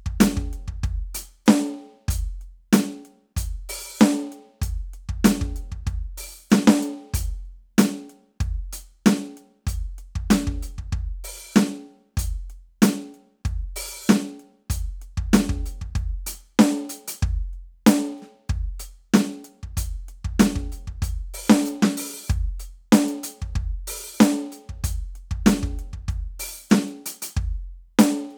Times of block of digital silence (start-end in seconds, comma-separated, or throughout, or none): none